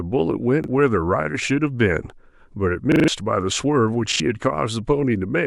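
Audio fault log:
0.64 s, 2.92–3.08 s, 4.12–4.20 s: repeated buffer. A 40 ms piece replays one, four, then two times with hard joins, so it sounds like a stutter rather than a silent gap.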